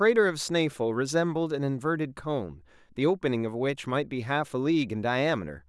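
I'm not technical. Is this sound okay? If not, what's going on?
Yes, nothing in this speech recording stands out as a technical fault.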